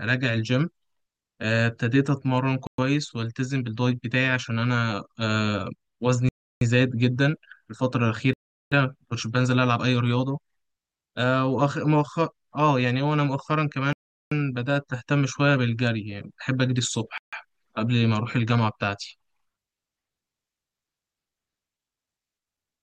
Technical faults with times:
2.67-2.78 Bluetooth stall
6.29-6.61 Bluetooth stall
8.33-8.72 Bluetooth stall
13.93-14.32 Bluetooth stall
17.18-17.33 Bluetooth stall

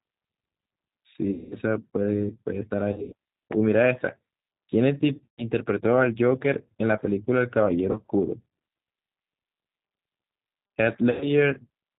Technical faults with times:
0.00-11.98 G.729 codec
1.31-1.57 VoIP packet loss concealed by the speech codec
2.92-3.14 VoIP packet loss concealed by the speech codec
5.18-5.50 VoIP packet loss concealed by the speech codec
7.91-7.98 VoIP packet loss concealed by the speech codec
11.11-11.28 VoIP packet loss concealed by the speech codec

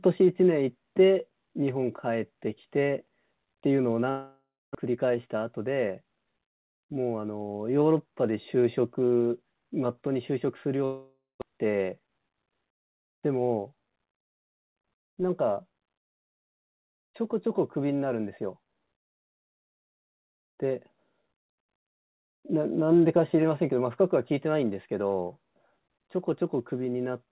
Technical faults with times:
4.10-4.77 long network dropout
4.86-7.28 jitter buffer speed-up
10.85-11.44 long network dropout
11.51-12.84 jitter buffer speed-up
21.00-22.23 channel delay (comb filtering)

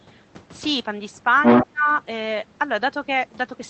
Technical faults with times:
1.43-1.66 other side's voice leaking through
1.65-1.90 speech suppressed in double talk

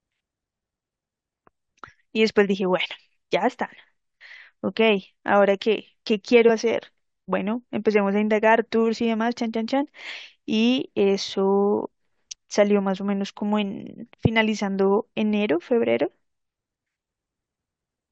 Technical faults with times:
6.48 compressed frames skipped

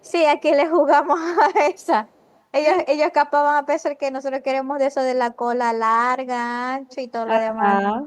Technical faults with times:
0.00-0.12 echo leak
1.77-2.40 echo leak
6.88-6.96 echo leak
7.25-7.65 speech suppressed in double talk

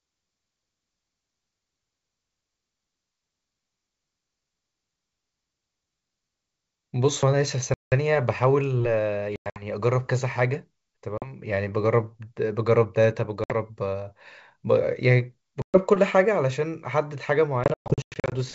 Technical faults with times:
7.74-7.93 packet loss on an ADPCM call
9.36-9.64 packet loss on an ADPCM call
11.18-11.31 packet loss on an ADPCM call
13.44-13.53 packet loss on an ADPCM call
15.62-15.80 packet loss on an ADPCM call
17.64-18.34 packet loss on an ADPCM call

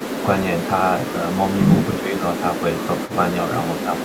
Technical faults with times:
2.00-2.23 speech suppressed in double talk
3.08-3.12 echo leak
3.87-3.92 speech suppressed in double talk

